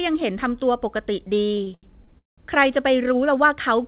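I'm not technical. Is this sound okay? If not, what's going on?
No. Between 1.44 and 2.4 s the speech has repeated stalls (stutter): it hangs nine times in under a second, with the longest pause near 0.19 s. Network data reached the call late or slower than it could be played, so the receiver kept running dry and stretched the last sound to fill each wait. Nothing is lost, but about 40% of that stretch is filler, so the speech drags and judders. The narrow, phone-like tone, with nothing above 4 kHz, comes from the call codec.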